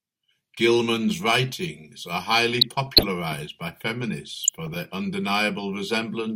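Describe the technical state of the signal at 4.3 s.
DAB burbling runs from 4.32 to 4.76 s: weak reception lets bit errors, around half a percent, slip past error correction into the MP2 data, so corrupted samples put short noise blips into individual sub-bands and corrupted scale factors make sub-bands jump in level for up to a frame, producing burbling blips over the speech.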